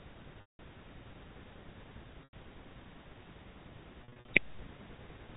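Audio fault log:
0.41–4.28 s, packet loss with pitch repetition: gaps of 180 ms at 0.41–0.59 s, 90 ms at 2.24–2.33 s, and 180 ms scattered over 4.04–4.28 s in runs up to 50 ms. The receiver loops the last pitch period, giving a held buzz that fades to silence in longer gaps.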